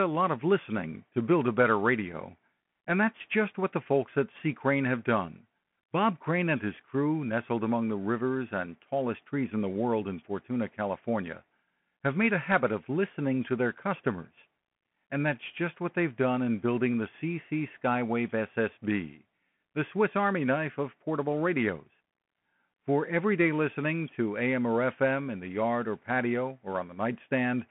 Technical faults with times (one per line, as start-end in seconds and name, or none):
0.00-27.71 Bluetooth CVSD headset codec